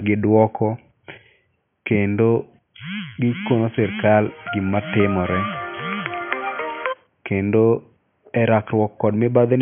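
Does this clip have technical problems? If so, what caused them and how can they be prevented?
No, there are no technical problems to address; the only background noise sits about 49 dB below the speech and belongs to the room rather than the recording chain.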